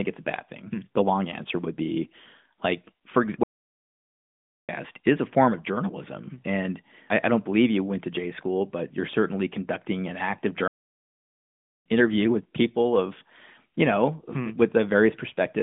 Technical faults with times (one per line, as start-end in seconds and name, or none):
3.43-4.69 playback stall
10.68-11.86 playback stall